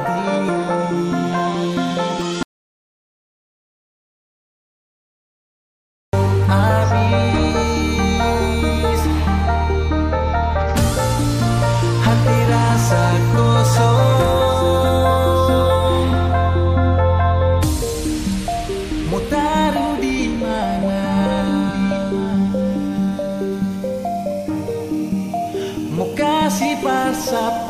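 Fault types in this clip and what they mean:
Audio dropout to silence: from 2.43 s to 6.13 s the sound cuts off abruptly and about 3.7 s of material simply vanishes, with no room tone or noise floor left underneath. The likely cause is the input signal being lost while the recorder kept writing silence. On the waveform this shows as a flat, silent stretch; on a spectrogram it is a fully black vertical band with hard edges on both sides.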